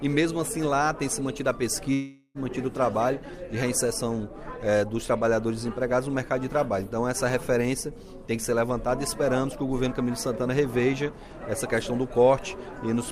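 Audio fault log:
1.93–2.38 s, long network dropout: incoming audio likely stopped arriving for about 0.42 s, so the receiver stretched the last sound into a fading buzz for about 0.41 s, then gave about 30 ms of silence before the audio resumed with that stretch missing.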